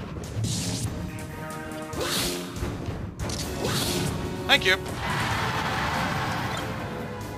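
At about 1.78 s there's a corrupt frame decoded: a brief chirpy blip, quick and fairly quiet, peaking somewhere around -35 dBFS. What's going on is that bits got flipped inside the compressed stream, and the decoder went ahead and played the damaged data anyway. Garbled gains or misread codes dumped energy into the wrong frequencies for roughly a couple of frames' worth of audio, and that's the squeak you catch.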